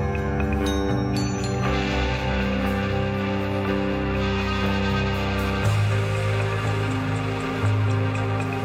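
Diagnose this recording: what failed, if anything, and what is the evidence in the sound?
Nothing failed in this recording; the sound gives no evidence of a fault at any stage.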